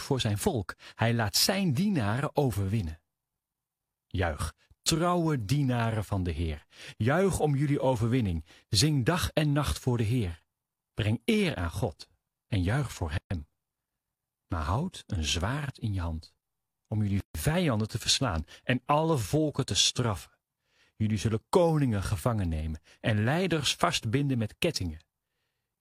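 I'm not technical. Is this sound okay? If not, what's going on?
No. The speech breaks off twice: from 13.18 to 13.31 s, a silence of about 130 milliseconds, and from 17.20 to 17.35 s, about 144 milliseconds. Each is a gap at a join of encoded pieces. The recording was compressed in separate sections and then stuck together untrimmed, so the brief silence the encoder leaves at each section's edges stayed in. The speech cuts off, with blurred edges, then resumes exactly where it left off.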